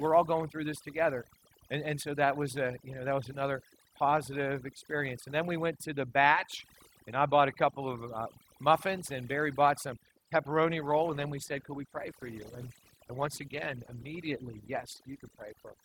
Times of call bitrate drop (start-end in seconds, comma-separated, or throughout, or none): 10.70-15.85